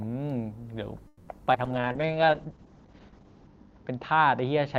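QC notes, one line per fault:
1.07 to 1.29 s, call audio freeze: the last sound is carried on for about 200 ms as a fading buzz before the audio resumes where it stopped, likely because packets stalled and the jitter buffer emptied. Unlike packet loss, nothing is missing, only a gap inserted.
1.53 s, short concealed packet loss: about 40 ms of audio never arrived, so a 10 ms synthetic continuation bridges it and the timeline shortens by roughly thirty milliseconds. It is heard as a brief smear or wobble, and unlike the freeze, real content is gone.
1.66 s to the end, call bitrate drop: the encoder falls from 40 to 8 kbps, with bandwidth narrowing from 20 kHz to 8 kHz, and stays at the lowest rate for about 1.8 s. The sound turns muffled and watery; timing is untouched, which separates it from the slow-down.
1.81 to 2.07 s, jitter buffer slow-down: the receiver repeats pitch periods to rebuild its reserve, adding 43 ms and playing at about 86% speed. 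The pitch stays the same while sounds drag out, unlike the freeze's fading fill.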